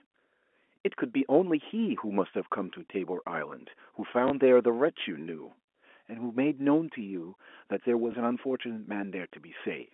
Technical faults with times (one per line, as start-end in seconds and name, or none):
0.40 packet loss with last packet repeated
4.28 packet loss with last packet repeated
8.12-8.14 packet loss with last packet repeated